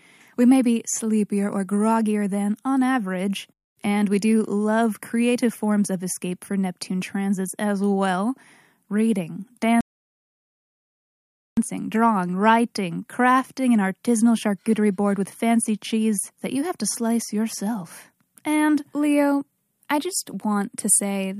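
At 9.81 s the speech just drops out to silence, and it doesn't pick back up until 11.57 s, right on "drawing writing crafting an". That's a rebuffering stall: the player burned through the audio it had downloaded and had to sit and wait for more to arrive. Nothing gets skipped. It resumes exactly where it stopped, but you've got about 1.77 s of dead air stuck into the middle.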